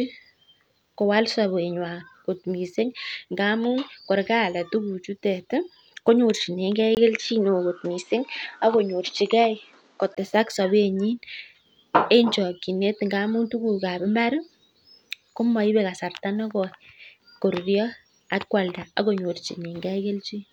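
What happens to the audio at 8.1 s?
At 8.1 s the speech is band-limited to 8.2 kHz with a faint new noise floor, likely an input switched to a poorer device, lasting 6.95 to 10.17 s, just after "ko nyorchinige".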